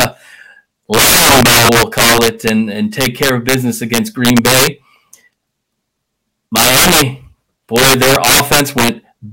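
Right from the start, 0.01 to 0.05 s, there's integer overflow, and it comes back at 0.94 to 2.49 s, 3.01 to 3.54 s, 3.94 to 4.67 s, 6.56 to 7.02 s and 7.76 to 8.89 s. The speech is being pushed about 4 to 20 dB past full scale, worst in that second stretch. Instead of limiting, the peaks wrap round to the opposite sign, so loud syllables break into harsh, violent cracks, far nastier than ordinary clipping.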